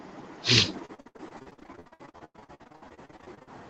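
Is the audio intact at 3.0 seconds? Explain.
No. At 3.0 seconds the speech sounds choppy and robotic, with pieces dropping out, inside a stretch of repeated packet loss from 0.85 to 3.49 s. About forty gaps, the longest 97 ms, were patched by extending the previous sound, concealing nearly half that span.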